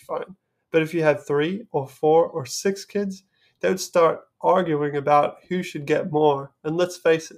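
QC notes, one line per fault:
No fault to note in this clip.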